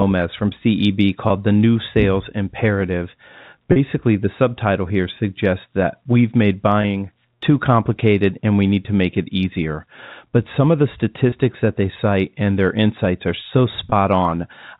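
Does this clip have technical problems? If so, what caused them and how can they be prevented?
Yes: packet loss with pitch repetition at 1.28–1.30, 6.82–6.84 and 13.90–13.92 s. Each 20 ms gap is bridged by a repeated pitch period, a brief buzzy hold rather than a silent dropout. The 4 kHz telephone band of the G.711 coding is audible throughout. A jitter buffer with forward error correction, or a less congested network path, would help prevent these losses.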